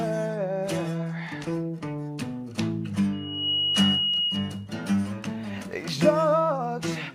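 A loudspeaker feedback squeal rises out of the audio at 3.12 s and holds until 4.69 s. It is a single tone at 2.9 kHz that swells over roughly 0.4 s and then sits about 5 dB above the rest of the sound. The microphone is picking up the loudspeaker it drives, and at that frequency the loop gain goes past unity. The tone keeps reinforcing itself.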